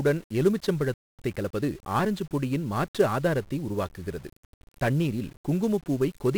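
Throughout the speech, 1-bit DFPWM compression buries the treble under fuzzy, crackly hiss, consistent with a one-bit-per-sample stream of about 48 kbps; the spectrogram shows a broadband noise floor smearing every frame. At 0.94 s a playback stall cuts the sound dead for about 250 ms, until 1.19 s, likely because the player ran short of data. The waveform shows a flat gap. From 1.19 to 2.17 s a time-compressed catch-up plays the backlog about 1.25 times faster at unchanged pitch, over "பொடியின் மாற்று ஆதாரத்தை உருவாக்குகிறது". On the spectrogram, syllables and harmonics stay level but crowd closer together.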